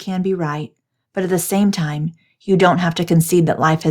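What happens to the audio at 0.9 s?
At 0.9 s you're in the middle of an automatic gain rising fault that runs from about 0.05 s right through to the end of the clip at 3.91 s. The AGC decided the input was too quiet and kept nudging its gain up, by about 7 dB overall. Since it's boosting everything, the speech and the background noise swell together, so the level creeps up steadily rather than jumping.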